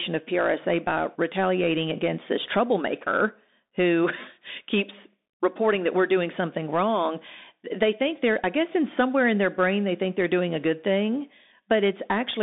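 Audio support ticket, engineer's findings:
Narrowband speech throughout, band roughly 200 Hz to 3.7 kHz, nothing above. Plainly audible codec damage. Probable component: Bluetooth CVSD headset codec, fits a 64 kbps link. Mechanism: one bit per sample steers an adaptive step up or down, and fast loud high content outruns the step and distorts.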